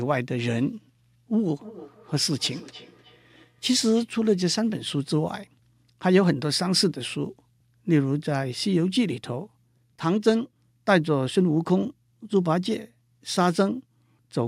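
From 1.59 to 4.12 s the speech carries a feedback echo between two devices. A second device in the same room replays this microphone's signal, and the microphone captures it again. Each canceller removes only its own playback, so the loop survives. Each phrase returns about 300 ms later, at most about 21 dB below the speech, sounding thinner and more ringing. On a spectrogram, faint copies of the speech harmonics trail the originals at a steady offset.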